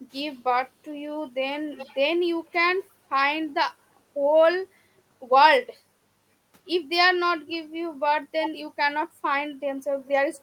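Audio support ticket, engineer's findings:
Echo leak: delayed copy of the speech trailing it by 320 ms, at 0.1–0.4 s, 1.76–1.98 s, 2.45–2.52 s, 4.97–5.02 s and 7.46–7.54 s. Strongest at 1.76 s, moderate at 7.46 s, barely audible elsewhere. Short scraps. Likely far-end loudspeaker pickup not fully cancelled by that side's echo canceller, with the residue returned down the line.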